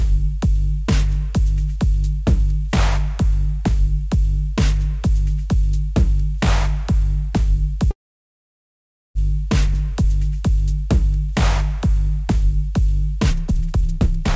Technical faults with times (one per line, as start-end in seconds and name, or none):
7.91-9.18 call audio freeze
13.30-14.35 jitter buffer speed-up